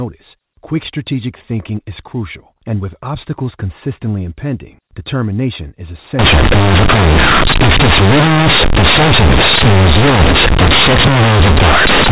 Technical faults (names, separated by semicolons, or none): companded audio read as linear